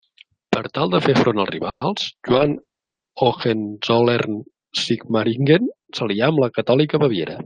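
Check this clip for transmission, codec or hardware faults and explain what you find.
Two faults are audible: a brief stall in the speech and a stretch of degraded coding shortly after.

From 1.69 to 1.83 s there is a call audio freeze. The last sound is stretched into a fading fill and then about 90 ms of silence before the speech resumes where it stopped. Nothing is lost, but the speech now runs roughly 120 ms later. This was likely caused by packets delayed in transit that left the jitter buffer empty.

From 2.31 to 3.86 s there is a call bitrate drop. The encoder rate falls from 32 to 9 kbps and stays at its lowest for about 1.1 s. Audio bandwidth shrinks from 20 kHz to 8 kHz, so the speech sounds muffled and coarse, with a watery texture, until the bitrate recovers.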